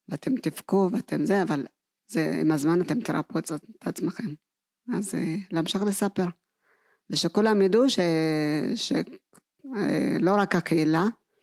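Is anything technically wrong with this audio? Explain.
No, nothing is technically wrong.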